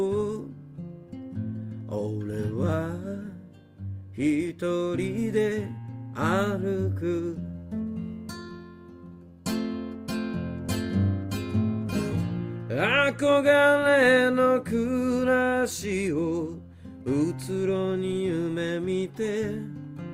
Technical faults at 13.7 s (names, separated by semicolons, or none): none